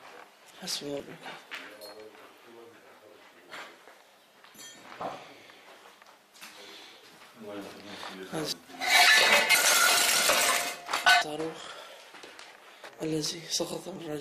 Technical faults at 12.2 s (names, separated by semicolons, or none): none